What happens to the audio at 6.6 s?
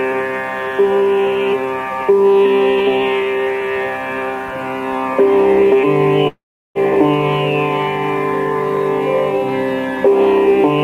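At 6.6 s you're in the middle of a gap that runs from about 6.27 to 6.78 s. That's likely a long network dropout, where roughly 480 ms of audio never arrived. The receiver tried to cover the hole by stretching the last bit of sound into a buzzy tail that fades out, leaving about 360 ms of dead silence. At 6.78 s the sound picks up again, but the missing half-second is simply gone.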